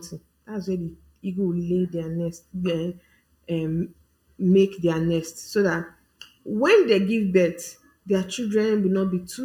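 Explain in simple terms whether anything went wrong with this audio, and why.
Channel delay (comb filtering) runs through the whole recording. One side arrives less than a thousandth of a second late, and mixing both sides together cancels evenly spaced pitches, starting around 700 Hz. That makes the speech sound hollow and phasey.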